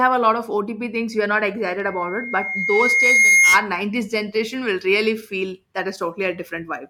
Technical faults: loudspeaker feedback squeal

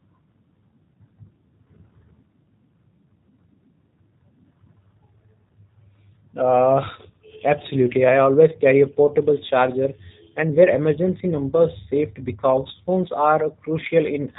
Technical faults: G.729 codec

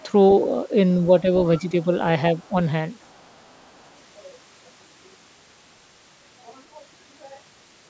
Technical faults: speech suppressed in double talk; other side's voice leaking through

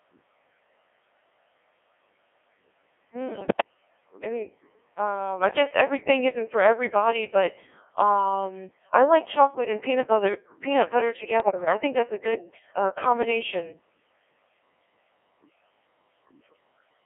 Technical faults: Codec 2 vocoder; bit errors on digital voice radio

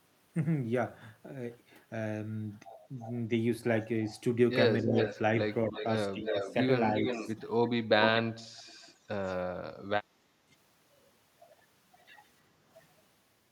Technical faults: echo leak; speech suppressed in double talk

